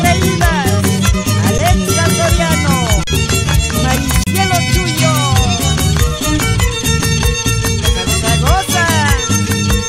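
At 1.58 s, from 3.04 to 3.07 s, and from 4.24 to 4.27 s the sound briefly stops as the waveform holds flat, and then resumes. These are underruns with a held sample: the output buffer ran dry, so the converter kept repeating its last value instead of falling to silence. Roughly 10, 40 and 30 ms of live audio went missing. The first gap, 10.67 ms long, fits a 512-sample buffer.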